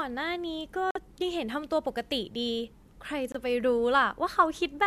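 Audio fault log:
0.91–0.97 s and 3.32–3.37 s, corrupt frame muted: the speech drops abruptly into digital silence for 66 ms, then 44 ms, likely because damaged compressed frames were rejected and replaced with silence; flatline gaps in the waveform, blank vertical strips on a spectrogram.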